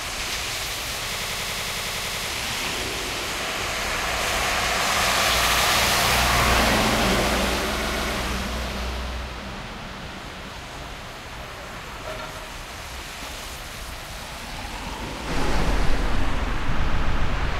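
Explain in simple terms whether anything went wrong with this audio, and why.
Repeated frames cause stutters at 1.14 to 2.25 s, 5.46 to 5.60 s, 7.83 to 8.11 s and 16.86 to 17.28 s. Compressed audio is stored in small chunks, and here a short stretch of those chunks was sent or written more than once, so the same fraction of a second plays again. The first repeat loops a 93 ms piece twelve extra times. The others replay 70 ms twice, 139 ms twice, and 139 ms three more times. Together this adds almost two seconds.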